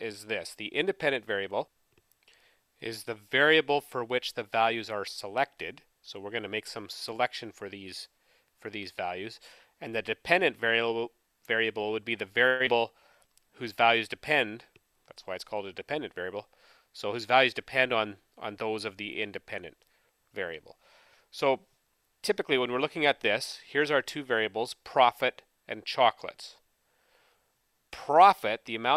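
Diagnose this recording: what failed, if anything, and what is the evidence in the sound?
Network stage, long network dropout. From 12.47 to 12.69 s the last sound is stretched into a fading fill. About 80 ms is missing. Packet loss is the likely cause.

Jitter buffer slow-down at the network receiver. Between 13.27 and 14.52 s the sound runs at 95% speed, same pitch. Repeated pitch periods add 65 ms.

Jitter buffer speed-up at the receiver. From 15.55 to 17.35 s the sound runs at 105% speed, same pitch. Removed pitch periods take out about a tenth of a second.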